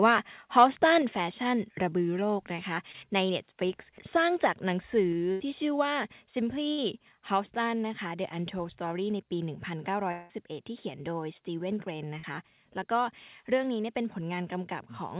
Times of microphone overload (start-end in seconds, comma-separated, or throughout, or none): 0.57-0.65